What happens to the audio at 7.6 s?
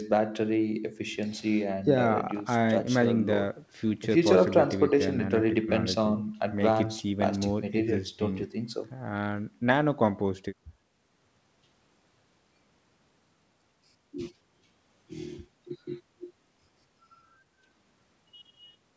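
At 7.6 s the speech comes through intact, with nothing breaking up, dropping out or distorting, and the top of the band ending at 8 kHz as expected after the call microphone processing and the G.722 WebRTC call path.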